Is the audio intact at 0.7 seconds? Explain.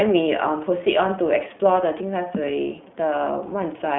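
No. At 0.7 s, as throughout the speech, the iLBC codec is at work. It codes each 20 ms frame's excitation on its own, which gives a slightly rough, synthetic edge, and the damage is plainly audible. The sound matches the 15.2 kbps mode. On a spectrogram the energy stops at a hard ceiling near 3.8 kHz with nothing above it, and little sits below about 150 Hz, leaving a narrow telephone band of about 150 Hz to 3.5 kHz.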